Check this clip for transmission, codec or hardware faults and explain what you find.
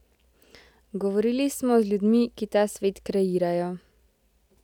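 Nothing wrong can be heard anywhere in the signal, which stays continuous and stable throughout the speech recording.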